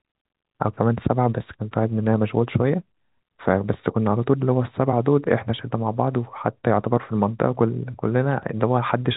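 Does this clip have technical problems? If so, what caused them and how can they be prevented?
No, this clip has no technical problems.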